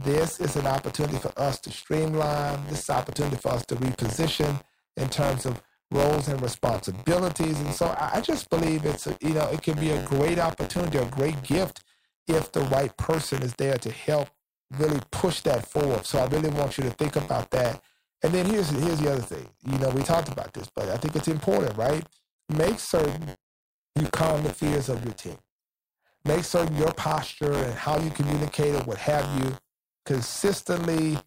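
From start to finish the speech carries buffer tearing, a steady robotic rattle at about 93.8 Hz that sits on the voice and drops out in the gaps. The writing side and the playback hardware have drifted so they cross inside every period, which fits a 512-sample buffer. In each cycle a small slice, well under a tenth, is stale audio from roughly 30 ms earlier, spliced in with hard edges at both ends.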